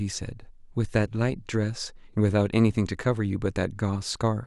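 Listening through this short speech recording, nothing stood out as a technical problem.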